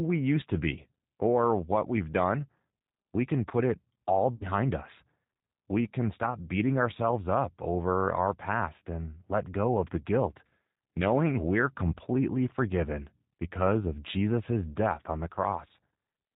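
G.729 codec damage runs through the whole speech clip. Its sound points to an 8 kbit/s coder that rebuilds each frame from a vocal tract filter, a pitch predictor and a few pulses. Nothing above 4 kHz survives, and the voice comes out slightly roughened and synthetic.

VoIP packet loss concealed by the speech codec occurs from 4.35 to 4.46 s, right after "can put it all". About 60 ms of audio went missing, which fits three lost packets. The decoder stretched its last pitch and filter into a fading sound, and the voice stays weak briefly afterwards.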